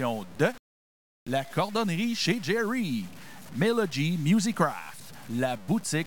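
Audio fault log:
Throughout: low bit depth without dither. Quiet passages sound gritty, with grainy distortion that follows the sound and a noise floor roughly 25 dB below the signal. This is likely truncation to a coarse word length, which fits about 7 bits, with no dither.
1.18 to 1.27 s: clipped start after a pause. After roughly 0.6 s of silence, where the output goes quiet as expected, the next sound begins abruptly with its opening 85 ms missing. The device was still waking or relocking when playback resumed.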